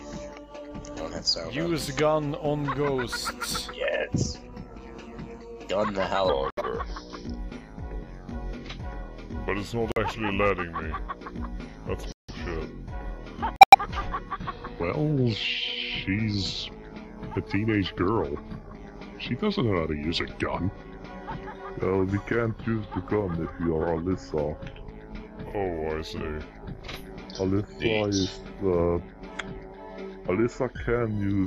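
From 6.29 s to the end, the sound drops in pitch and drags, running at 0.828 times its proper speed and sitting roughly three semitones low, with pitch and tempo lowered together. That is a section at the wrong speed, most likely because this part was played out or edited against the wrong clock rate. Within that slowed stretch the audio cuts out abruptly to dead silence four times: 6.50 to 6.62 s, 9.92 to 9.98 s, 12.12 to 12.30 s and 13.56 to 13.75 s. These are corrupt frames muted. Flipped bits damaged a run of compressed frames, the decoder rejected them, and the player filled their slots with silence. The holes last between about 0.06 and 0.19 s, which fits anywhere from two to eight frames lost at a time. Timing is kept, so the sound resumes exactly where it should after each gap.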